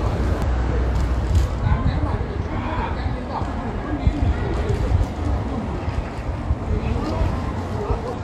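A recording of sounds is broken three times by short glitches, at 0.42–0.48 s, 3.39–3.45 s and 8.13–8.19 s, each lasting roughly 55 ms. These come from damaged data in the compressed stream: a stretch of the encoded bytes is corrupt, so the decoder misreads or discards the affected frames, loses its place in the bitstream and scans for the next valid frame header before clean playback resumes.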